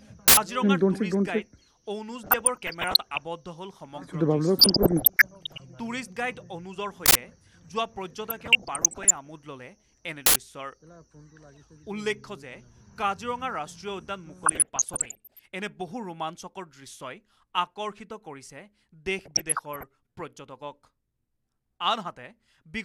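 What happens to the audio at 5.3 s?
At 5.3 s the audio is in the middle of a burst of DAB burbling that runs from about 4.59 s to 5.60 s. Reception is weak enough that bit errors, on the order of one percent, get past the error correction into the MP2 stream. Corrupted samples put short blips of noise into individual sub-bands and corrupted scale factors make sub-bands jump in level for up to a frame, so the sound gets a bubbling, squelchy layer of chirps over it.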